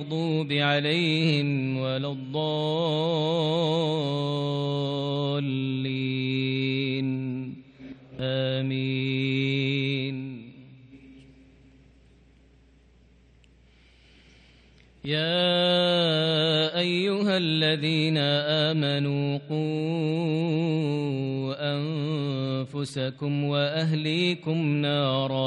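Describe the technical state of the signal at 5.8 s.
At 5.8 s the signal is intact, with no dropout, distortion, glitch or other technical fault audible at that moment.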